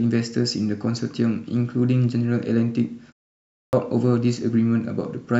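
Clipped start after a pause at 3.44 s: the output device hadn't woken after 0.4 s of silence, swallowing 290 ms, so speech bursts in abruptly.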